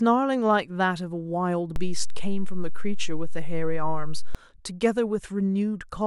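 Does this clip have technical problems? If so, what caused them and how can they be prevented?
Yes. A DC step occurs: the waveform's zero line jumps at 1.76 s, as when a converter recalibrates or an offset input switches in, holds, then drops back at 4.35 s. Each jump is heard as a low thump while the speech carries on over it. Preventing it means keeping converter calibration and input switching out of live recording and placing a high-pass or DC-blocking filter in the chain.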